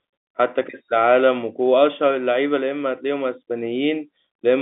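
No technical faults occur in this speech, which comes over a telephone line with nothing above about 3.8 kHz.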